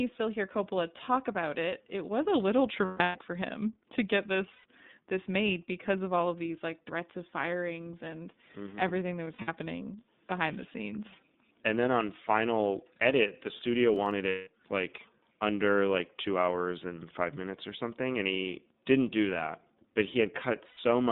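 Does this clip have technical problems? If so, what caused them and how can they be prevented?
Yes. Three kinds of fault can be heard.

The whole clip passes through the iLBC codec at 13.33 kbit/s with 30 ms frames. Speech is limited to a 150 Hz to 3.7 kHz band, so it sounds thin and telephone-like, with a plainly audible rough, slightly synthetic grain. That grain comes from coding each frame's excitation on its own. A simple band-limited line would sound dull but smooth, without this roughness. Using a wideband codec such as Opus at a healthy bitrate prevents it.

Lost iLBC frames cause five dropouts. From 2.85 to 3.18 s, about 270 ms is lost in pieces spread over 300 ms, and the longest piece is roughly 150 ms. From 4.53 to 4.65 s, 120 ms is lost. From 9.24 to 9.49 s, 150 ms is lost across 240 ms, with the longest piece around 70 ms. From 14.29 to 14.47 s, 180 ms is lost, and from 20.68 to 20.78 s, 90 ms. 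Each gap is filled with a held, buzzy, breathy vowel made from the repeated last pitch cycle and noise, and the voice recovers almost immediately afterwards. Hard silences or clicks would point elsewhere. A jitter buffer, forward error correction or a more reliable network path prevents this.

Processor overload crackle appears from 13.94 to 14.11 s. It is a short burst of gritty tearing. Roughly five buffers of about 10 ms each were skipped, and each leaves a tiny hard-edged gap. Unlike the smooth vowel-like fill of the lost frames, this sounds harsh and broken and comes from the playback or capture side rather than the network. Larger audio buffers and less competing CPU load prevent it.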